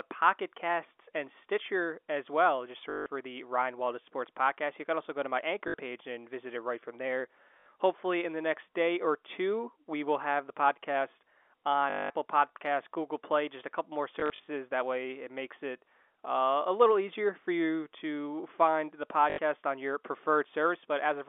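Packet loss with last packet repeated occurs at 2.9–3.06 s, 5.68–5.74 s (between "also go to my" and "page and visit it"), 7.6–7.66 s (after "it right from there"), 11.9–12.1 s, 14.2–14.48 s (short scattered gaps) and 19.3–19.38 s (between "you to find the" and "on your"). The receiver fills each gap by looping the last packet. The longer runs buzz at 50 Hz, which fits 20 ms packets, and produce a robotic stutter over the narrowband telephone audio.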